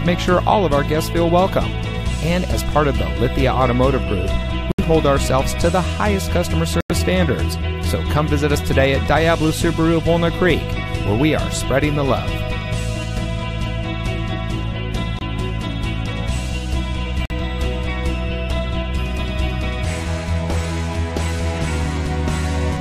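Four corrupt frame muted gaps fall at 4.72, 6.81, 15.19 and 17.25 s, lasting about 90, 110, 40 and 60 ms. Damaged compressed frames were rejected and replaced by silence, so each hole starts abruptly, with no concealment smearing and no loss of timing.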